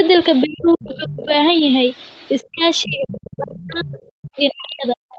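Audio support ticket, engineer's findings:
Speech suppressed in double talk: talker ducks by up to about 40 dB at 0.43–1.33 s, 2.52–3.93 s and 4.36–5.03 s. Likely echo canceller attenuating both talkers during overlap.

Other side's voice leaking through: far-end speech audible about 20 dB under the talker at 0.45–1.25 s and 2.81–4.31 s. Likely incomplete echo cancellation of the loudspeaker signal.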